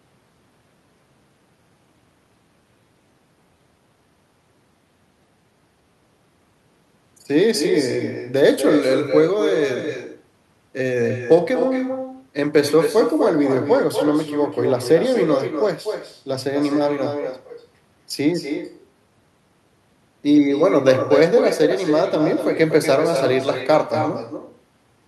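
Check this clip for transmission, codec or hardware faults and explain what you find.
One fault is present. Echo with no canceller runs throughout. Every phrase returns about a fifth of a second later, roughly 7 dB quieter. The far end's loudspeaker feeds its microphone unchecked. The copy sounds thin.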